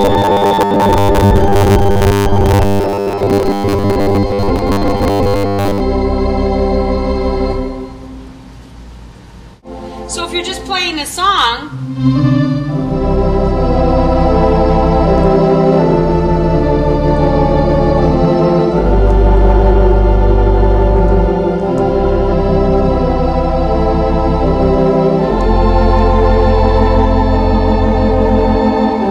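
Right from the start, 0.01 to 5.82 s, you get that robotic sound from repeated short buffers: a hard, metallic buzz at 100 Hz riding over the audio. That likely comes from the playback repeating about 10 ms chunks over and over, for most of that stretch.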